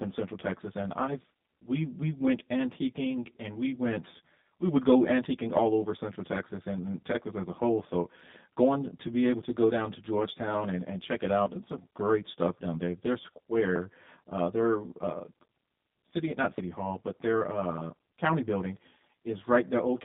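From start to finish, one channel runs late against the other by roughly 10 ms, and the mono sum shows channel delay comb filtering: evenly spaced notches starting near 40 Hz that cut through the speech, giving it a hollow, phasey colour.

Across the whole clip, the speech also carries plainly audible G.729 codec damage. Content is confined to a line band of about 150 Hz to 3.7 kHz, and the parametric reconstruction, consistent with an 8 kbit/s G.729A stream, leaves syllables rough and somewhat synthetic.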